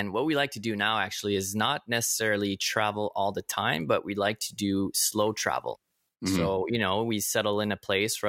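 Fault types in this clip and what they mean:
No faults can be heard anywhere in the speech.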